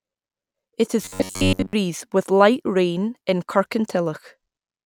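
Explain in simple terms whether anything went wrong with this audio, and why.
From 1.02 to 1.73 s, just before "with light rain in", the speech turns into a rigid, metallic 94 Hz buzz: robotic sound from repeated short buffers, likely from roughly 11 ms chunks replayed over most of that stretch.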